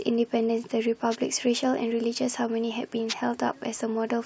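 A speech recording with two wireless microphone noise hits, short bursts of static at 1.11 to 1.16 s and 3.08 to 3.14 s. Each is the radio link fading as reflections cancel, letting receiver noise swell up over the voice for a moment.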